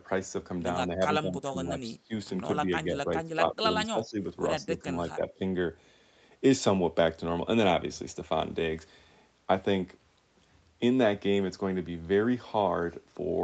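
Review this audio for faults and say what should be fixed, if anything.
The speech ducks at 0.87–1.01, 1.21–2.12, 2.66–3.64, 3.92–4.26 and 4.61–5.31 s, falling roughly 10 to 20 dB in places. That's likely speech suppressed in double talk: the echo canceller couldn't separate the talker from loudspeaker echo and turned both down. Better double-talk detection in the echo canceller, or a headset to remove the echo, would prevent it.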